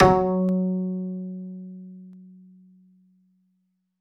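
A recording of everyday sounds with two brief underruns with held sample, at 0.49 s and 2.13 s, lasting 0.73 ms and 0.45 ms. The output buffer ran dry, so the converter held its last value. The waveform shows a tiny flat step where under a millisecond of audio was lost.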